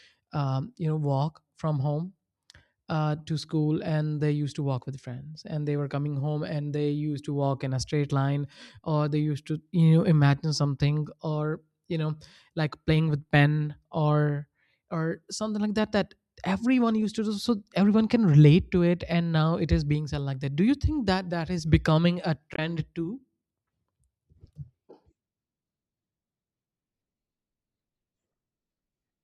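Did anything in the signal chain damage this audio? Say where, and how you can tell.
Yes. Right after "that is becoming a", a brief glitch cuts through the speech from 22.54 to 22.59 s. That is damaged data in the compressed stream: the decoder hit corrupted frames, lost sync, and resumed at the next valid frame header.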